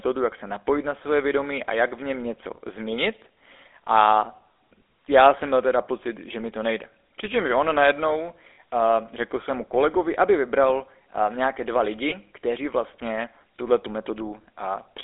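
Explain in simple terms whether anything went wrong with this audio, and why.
Yes, two things went wrong. The whole recording passed through the GSM full-rate codec, the original mobile-phone voice coder. It rebuilds speech from a rough model of the mouth driven by coarse pulses, so every voice sounds buzzy and gravelly. Unlike plain phone-line muffling, this grainy roughness sits inside the sound itself.

There are also lost GSM frames. After "on najednou", from 8.54 to 8.58 s (40 ms), and after "vybral uh nějaké dva" at 12.1 s (20 ms), missing pieces were filled by repeating the last good one. This leaves a brief metallic ring instead of a silent gap or click.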